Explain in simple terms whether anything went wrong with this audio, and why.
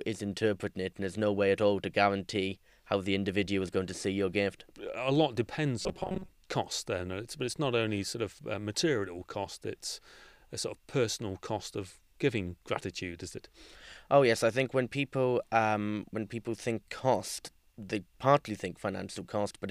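The audio stream likely ran short of fresh data between 5.81 and 6.29 seconds, so the player kept repeating tiny scraps of about 5 milliseconds, roughly half the time. That produces robotic sound from repeated short buffers: the speech becomes a stiff, metallic buzz around 188 Hz.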